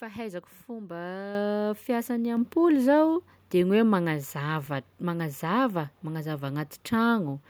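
At 1.35 s and again at 2.37 s, just before "zao de", the microphone volume is stepped up, by about 8 dB and then about 5 dB. Speech and background noise jump together in one instant step, unlike a gain control's gradual ramp.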